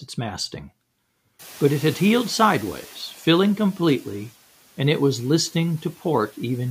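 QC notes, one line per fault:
1.39–3.13 s, noise suppressor catching up: The room noise jumps by about 20 dB at around one and a half seconds. The suppressor's noise estimate lags behind this rise, so the noise passes with little reduction at first. The noise then sinks gradually, by about 4 dB, as the estimate adapts over 1.74 s. It settles just before "filling completely and it", where the room noise sits about 26 dB below the speech.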